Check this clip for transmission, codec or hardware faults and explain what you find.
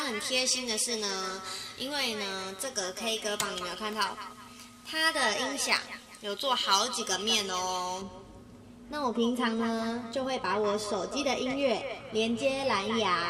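One fault is present. From the start to 8.02 s the sound is thin, bright and hissy-edged, with sibilance jumping forward. This is pre-emphasis left on: treble was lifted for recording or transmission and never cut back, leaving 10 kHz about 11 dB above 1 kHz, which fits a J.17 curve.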